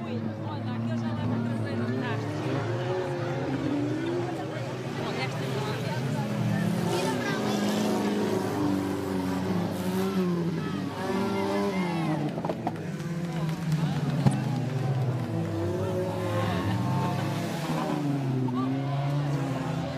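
Corrupt frame decoded at 4.06–4.08 s, 14.26–14.28 s and 18.48 s: each event is a brief chirp or burst of noise in the audio, where damaged bits in a compressed frame were still decoded, so misread gains and codes scattered energy into the wrong frequencies for the life of that frame. The first and last blips are faint, around -30 to -35 dBFS. The middle one is much louder, near -10 dBFS, and its length points to two consecutive frames being hit.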